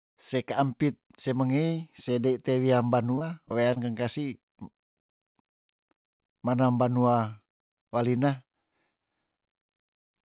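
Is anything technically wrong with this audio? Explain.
Yes, this speech has several call-transmission faults.

From 3.12 to 3.78 s there is repeated packet loss with a robotic sound. Six gaps, the longest 21 ms, were each patched by extending the preceding sound, so about 13% of that span is synthetic. It sounds choppy, with pieces missing. A spectrogram shows repeated smeared harmonic stretches, and the waveform shows looped, too-regular cycles.

Short concealed packet loss hits at 4.70 s, 5.30 s, and three times in a row at 6.27, 6.30 and 6.33 s. Each roughly 20 ms hole was bridged by continuing the last sound and then blending back into the real audio. Each one is a brief smear or wobble, seen as a short blurred patch or a kink in the waveform.

From 6.37 to 6.68 s there is a jitter buffer slow-down. The receiver rebuilt its reserve by repeating single pitch periods, adding 37 ms, so the speech plays at about 90% speed with unchanged pitch. 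It sounds drawn out. On a spectrogram the harmonics are stretched in time but not shifted in frequency, and the waveform shows near-identical repeated cycles.

The G.711 mu-law call path leaves nothing above 4 kHz, so a spectrogram shows a hard ceiling at 4 kHz.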